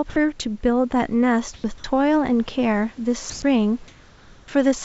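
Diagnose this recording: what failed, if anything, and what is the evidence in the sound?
Sound dropped by the voice detector, at call processing. From 0.10 to 0.16 s, about 60 ms of audio is swapped for steady, featureless noise. Roughly 50 ms of real sound disappears under it. The sender's voice detector most likely mistook this sound for background and stopped transmitting. The receiver filled the gap with comfort noise until the detector fired again. The sound then returns.

Dropped samples, in the driver or buffer stage. At 1.14 s there is one sharp click. It is a thin vertical line across the spectrum. No sound is audibly missing. The loss is about one sample, a tiny fraction of a millisecond. The waveform jumps straight from one value to a later one, and that step makes the click. The likely cause is a buffer handoff that skipped a sample.

Comfort noise in place of the background, at call processing. 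The room's background sits about 26 to 28 dB below the loud passages. It is replaced at 1.54 to 1.64 s, 3.30 to 3.42 s and 3.88 to 4.48 s. The first two patches are about 5 dB louder than the real background. The long last one is about 1 dB quieter. Each is smooth and lacks the room's texture. Discontinuous transmission is the likely cause. The sender paused between speech and the receiver synthesised noise. The band stops near 7 kHz, which fits a G.722 call codec.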